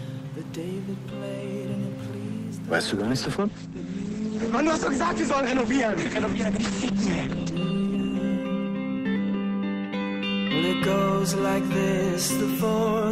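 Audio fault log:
2.89–9.79 s, call bitrate drop: the sound turns rough and watery and loses everything above 8 kHz, worst for about 4.3 s. The encoder was starved of bits, which fits a fall from 64 to 10 kbps, so it codes coarsely and narrows bandwidth from 20 kHz.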